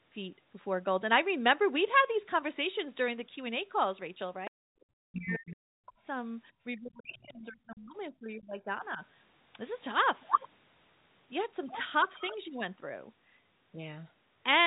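Speech clip carried over a narrowband call path, with nothing above 4 kHz, which fits G.711 mu-law at 64 kbps. The other side's voice leaks through briefly at 4.45–4.5 s and 7.14–7.28 s, at about 25 dB and 35 dB below the talker, likely residual loudspeaker echo the canceller failed to remove. Speech is suppressed in double talk from 4.48 to 6.05 s, dropping by up to about 40 dB for roughly 1.5 s, and again from 6.73 to 9.01 s, by up to about 30 dB for roughly 2 s. This is likely the echo canceller attenuating the talker while the far end was also active.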